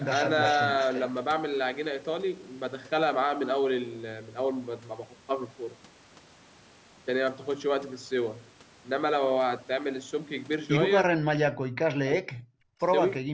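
Speech, with an echo leak at 0.06–0.61 s and 0.80–1.00 s: a delayed copy trails the talker by about 340 ms, roughly 10 dB and then 15 dB below the speech, likely because a loudspeaker echo got past the far end's echo canceller. Speech suppressed in double talk from 11.06 to 12.74 s, with the voice dipping and cutting out in pieces for about 1.5 s and falling by up to roughly 40 dB, likely because the echo canceller muted the talker while both sides spoke at once.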